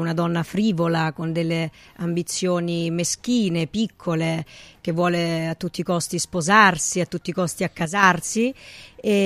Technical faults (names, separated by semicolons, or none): one channel drops out